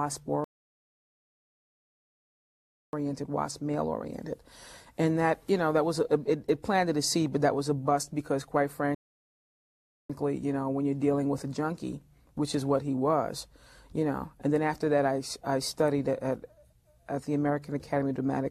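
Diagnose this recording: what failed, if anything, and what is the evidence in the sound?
Classic rebuffering stall at the playback end: the sound drops to dead silence from 0.44 to 2.93 s and again from 8.95 to 10.10 s, then picks up exactly where it left off. The player starved for downloaded data and waited, adding roughly 2.5 s and 1.15 s.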